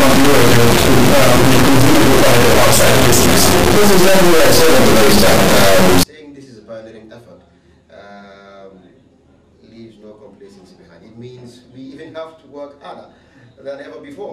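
From 0.00 to 6.03 s, integer read as float: the sound points to 32-bit integer samples decoded as 32-bit floats, giving harsh, extremely loud square-wave buzzing that drops to silence in quiet passages.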